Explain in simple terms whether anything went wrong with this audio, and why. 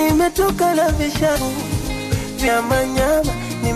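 Compressed frames skipped at 1.35 to 1.37 s and 2.46 s: the audio jumps ahead about a tenth, then a fifth, of a second.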